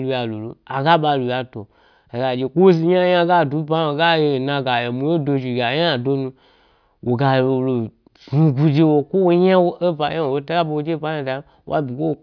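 Listening closely to the speech, nothing stood out as a technical fault at any point.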